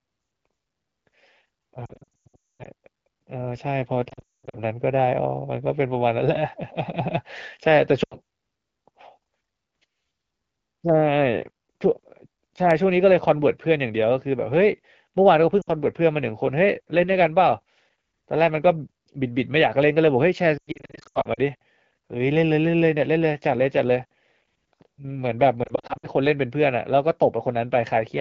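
Lost AMR speech frames strike the speech at 1.86–2.67 s (lost stretches over 0.8 s, longest about 240 ms), 4.09–4.56 s (longest about 200 ms), 8.03–8.15 s, 15.62–15.69 s, 20.57–21.40 s and 25.64–26.07 s. Corrupted frames forced the decoder to repeat the last pitch and vocal tract settings at falling gain, so the sound smears, warbles and fades, then returns rough. A spectrogram shows frozen, stretched harmonics decaying into gaps. The waveform shows the envelope sagging toward silence.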